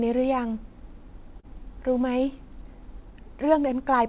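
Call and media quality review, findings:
Short concealed packet loss, 1.40–1.46 s: about 30 ms of audio missed the decoder. The receiver's concealment extended the preceding sound, then blended back, leaving a brief smear against the 4 kHz narrowband call audio.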